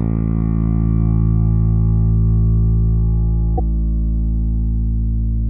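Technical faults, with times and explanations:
3.57–3.60 s, broken MP3 bit reservoir: a brief 30 ms disruption where the audio skips ahead. This is likely a cut in the stream that left the following frame pointing back at the wrong data. The span fits one 26 ms MP3 frame.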